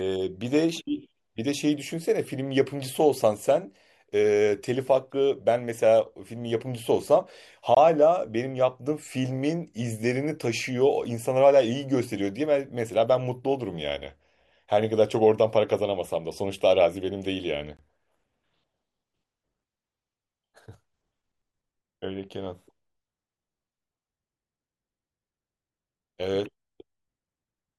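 Two short holes cut into the speech, at 7.75 to 7.77 s and again at 17.77 to 17.79 s, each about 21 ms of silence. This is a gap between chunks: the audio was handled in 10-second chunks, and silence was inserted at each join.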